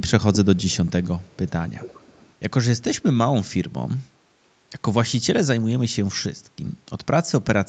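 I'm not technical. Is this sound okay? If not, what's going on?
No. From 0.56 to 1.5 s and from 1.8 to 2.33 s, a quiet delayed copy of the speech trails about 0.36 s behind, louder the second time. This is echo leak, likely from a loudspeaker whose echo canceller let its sound back through.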